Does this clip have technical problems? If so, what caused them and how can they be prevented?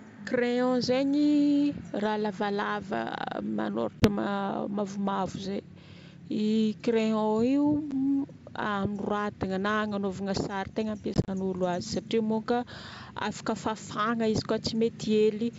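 Yes. This speech has packet loss on an ADPCM call, heard as hard-edged gaps at 4.00–4.07 s (about 20 ms missing), at 7.91 s (10 ms), and at 11.14–11.30 s, where 80 ms drops out in short bursts over 140 ms, the longest 30 ms. Each gap is filled with silence, so the receiving decoder's predictor and step size lose track of the sender's. Speech resumes with brief distortion, then settles. The wideband G.722 path stays clear up to 7 kHz and sounds like full-rate operation. To prevent it, reduce network loss with QoS prioritisation or an adequate jitter buffer, and use packet loss concealment that resynchronises the decoder state rather than inserting silence.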